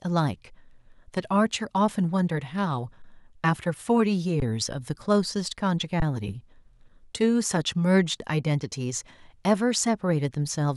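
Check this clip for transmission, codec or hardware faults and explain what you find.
The speech has three brief stalls in playback, each an underrun with held sample, at 3.02–3.04 s, 4.40–4.42 s and 6.00–6.02 s. Each time the output buffer emptied for 20 ms and the converter froze on its last value, so the waveform sits flat before resuming exactly where it paused, with essentially no audio skipped. The result is a soft hitch rather than a gap. Unlike a dropout to silence, the held level avoids a sharp click at either edge.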